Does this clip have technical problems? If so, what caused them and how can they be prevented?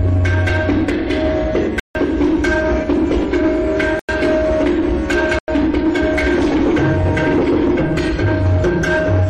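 Yes. Blocks of digital silence fall at 1.80–1.95 s (154 ms), 3.99–4.09 s and 5.39–5.48 s (93 ms each). The 93 ms gaps fit 4096-sample buffers that weren't filled in time. To prevent this, enlarge the output buffer or lighten the processing load so each buffer is delivered before its deadline.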